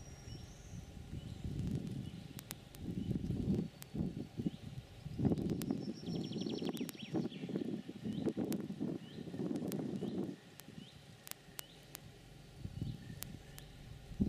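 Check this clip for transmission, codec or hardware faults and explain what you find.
One fault is present. Word clock ticks run from 0.12 s to 14.26 s. The receiving device runs on its own clock, unlocked from the sender's, with a mismatch of roughly 500 parts per million. Every 40 ms or so, one sample is dropped or repeated, giving hundreds of evenly spaced ticks across the audio.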